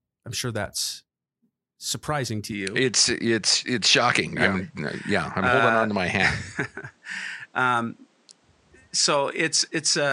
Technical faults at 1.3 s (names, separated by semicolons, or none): none